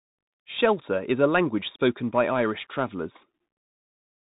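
Throughout, the Bluetooth CVSD headset codec cuts everything above 3.8 kHz, and its one-bit step coding adds scratchy s sounds and granular hiss that a plain low-pass wouldn't.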